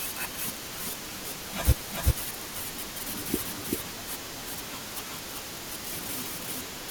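Speech, with a doubled audio track running for the whole clip: a second full-band copy of the audio trails the original by around 400 ms at roughly the same level, so every phrase is heard twice. The repeat is dry, with no decay or room colouring, so it is not a reflection or reverb but a straight duplicate. The cause is likely a second capture of the same signal through a slower path, or an edit leaving two unaligned copies in the mix.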